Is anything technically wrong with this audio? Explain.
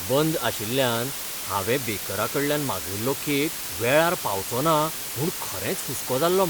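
Yes. For the whole clip, the speech has been reduced to a low bit depth with dither, apparently only 5 bits. Dither noise was added before each sample was rounded to so few levels, so the rounding error no longer tracks the signal and becomes a steady, even white-noise hiss instead of grainy distortion. With so few bits, that hiss sits only about 5 dB below the speech, a thick, constant wash heard under and between every phrase.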